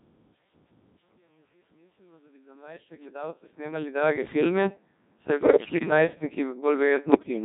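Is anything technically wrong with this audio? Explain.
Yes. The entire clip has passed through the Codec 2 vocoder, and the sound fits a rate of about 1.6 kbit/s. Only pitch, voicing, energy and a spectral envelope are carried, and the decoder rebuilds the speech from sine waves. The original waveform is lost, so the result is heavily robotic and buzzy.

Bit errors on digital voice radio occur twice, from 5.37 to 5.90 s and from 7.12 to 7.29 s. The second burst is shorter but noticeably denser in errors. Flipped bits corrupt each affected frame's pitch, level, voicing and spectral parameters, so the synthetic speech lurches in pitch and timbre and breaks into warbles and bleeps.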